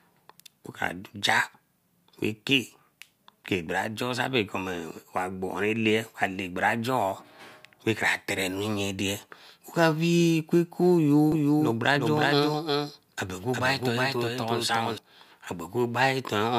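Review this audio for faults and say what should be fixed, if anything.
From 11.32 s to 14.98 s there is a doubled audio track: a second, full-band copy of the speech runs about 400 ms behind at roughly equal level, with no decay, starting and stopping abruptly. The likely cause is a second capture path or an edit leaving two out-of-step copies. Route each source through a single capture path and check edits for overlapping duplicate regions.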